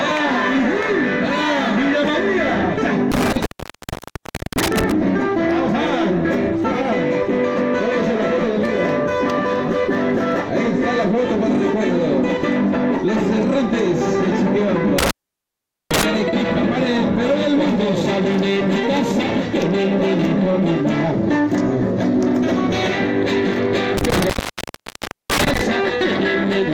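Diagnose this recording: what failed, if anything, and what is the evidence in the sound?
An intermittent contact in the analogue wiring, a loose cable or plug that momentarily lost its connection, broke the signal path three times. The sound drops out with crackle at the edges between 3.12 and 4.92 s (open for about 1.12 s), 14.98 and 16.03 s (about 0.80 s), and 23.97 and 25.61 s (about 1.00 s). While the contact is open, faint hiss remains. The crackle comes from the connection making and breaking before it settles.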